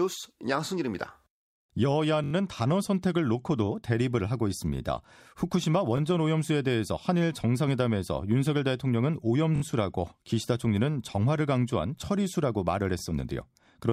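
Repeated buffer faults occur at 2.24–2.33 s, 5.97–6.00 s, 9.56–9.62 s and 12.99–13.01 s. New audio arrived late, so the last 21 ms block replayed. This fits a 1024-sample buffer. Each is a brief stutter with hard joins. The longest, at 2.24 s, repeats four times.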